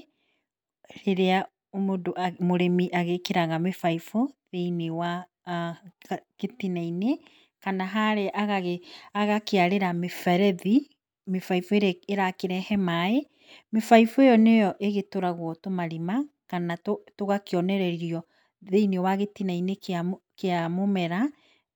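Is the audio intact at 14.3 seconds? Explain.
Yes, at 14.3 seconds the speech plays through cleanly, with no dropout, click, distortion or other fault audible at that point.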